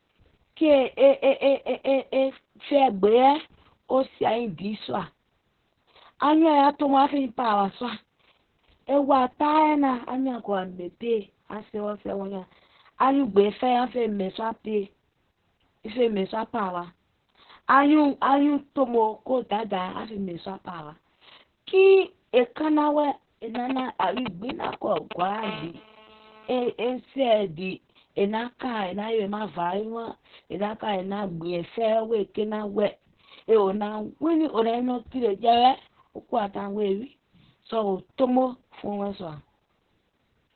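Opus voice compression runs through the whole recording. Nothing is heard above about 4.2 kHz, so the codec has fallen back to its narrowband SILK linear-prediction mode, which points to a very low bitrate, in the region of 6 kbps. With so few bits, the excitation signal driving the speech model is coded very coarsely. The damage is heavy: the speech sounds muffled, hoarse and somewhat robotic.

GSM signalling bursts appear from 23.55 to 25.44 s. A nearby 2G phone is exchanging short groups of radio bursts with the network, and the audio circuitry rectifies those pulses into sound. The result is a galloping dit-dit-dit of brief buzzes built on a 217 Hz pulse rate. The bursts are loud, nearly as strong as the speech itself, and they break through as a separate, mechanical rhythm.

GSM phone buzz follows directly, from 25.44 to 26.73 s, as the phone moves into continuous call transmission. 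Now the bursts arrive steadily at 217 per second, and rectification turns them into a hard, raspy buzz at 217 Hz with a dense stack of harmonics. It bears no relation to the speech beneath it and sits about 18 dB below it. It is quieter than the bursts before it.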